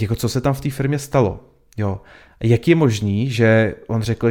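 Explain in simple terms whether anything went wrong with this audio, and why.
Nothing went wrong with this recording of speech; no technical fault can be heard anywhere in it. There are no dropouts, glitches or distortions to point to at any moment.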